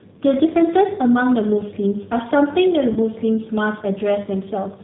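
G.729 codec coding runs through the whole clip, audibly. The speech has been squeezed through a low-rate vocal tract model that keeps only a filter shape, a pitch estimate and a few excitation pulses per short frame, so nothing above 4 kHz survives. The voice sounds band-limited, slightly rough and synthetic, all consistent with an 8 kbit/s G.729A-type stream.

VoIP packet loss concealed by the speech codec occurs from 2.93 to 2.99 s, with about 30 ms of audio missing, which points to a single lost packet. With no new data arriving, the decoder repeated its last pitch and filter settings at falling gain, so the speech smears into a brief buzzy tone or coloured noise that fades. Because each frame depends on the previous one, the sound stays weakened or distorted slightly beyond the gap before recovering.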